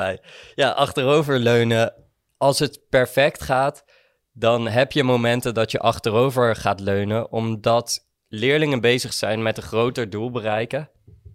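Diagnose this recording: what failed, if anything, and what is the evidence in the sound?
Nothing in this speech recording points to a failure at any stage of the chain, so there's no fault to trace here.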